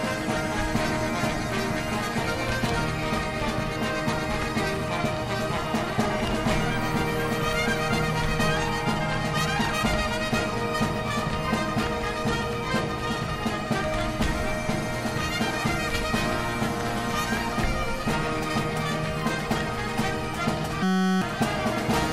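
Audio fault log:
20.83–21.22 s system hang loop: the machine or its driver froze while the sound hardware kept replaying one 5.33 ms slice of its ring buffer, which fits a 256-sample buffer. The exact repeats fuse into a steady 188 Hz buzz, replacing roughly 0.4 s of audio.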